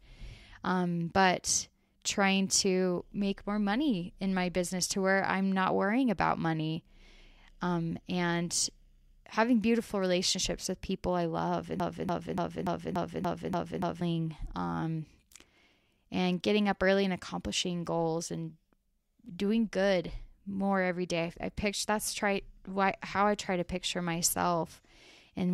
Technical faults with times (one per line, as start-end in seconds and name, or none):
11.80-14.01 broken-record loop